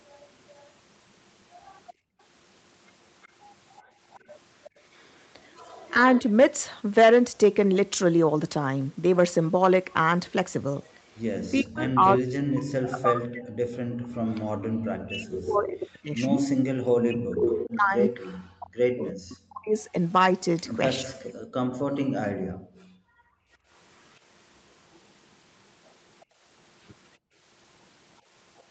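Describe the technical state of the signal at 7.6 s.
At 7.6 s the speech is intact, with no dropout, glitch or distortion, only the ordinary call-path character of audio band-limited to 8 kHz.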